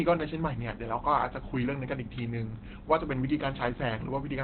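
Opus compression, heard across the whole clip, likely explains why the speech sounds muffled and hoarse from start to finish. Nothing survives above about 4.3 kHz, a narrowband ceiling that points to the encoder running in its speech-oriented SILK mode at a low rate, around 12 kbps. With so few bits, the coder keeps only a coarse model of the voice, so the damage is heavy: consonants lose their edge and the tone turns rough and thin.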